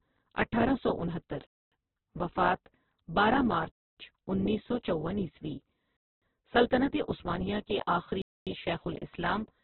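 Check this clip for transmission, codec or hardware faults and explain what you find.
Two faults are present: heavy lossy compression across the whole recording, and four silent holes at regular joins.

Opus compression, throughout: the speech sounds noisy, rough and grainy, with nothing above 4.2 kHz, so it has a narrowband, telephone-like quality. The cause is likely an Opus encoder starved of bits, pointing to a rate around 8 kbps. With so little data, it narrowed the bandwidth and filled the bands it kept with coarse noise rather than detail, roughening every sound.

Gap between chunks, at 1.47–1.72 s, 3.72–3.97 s, 5.97–6.22 s and 8.22–8.47 s: the speech stops dead for 250 ms each time, and the holes recur every 2.25 s. The audio was delivered in 2-second chunks, and silence was left at each join, from padding or a late start on each chunk. Nothing is lost, but the speech is chopped at every boundary.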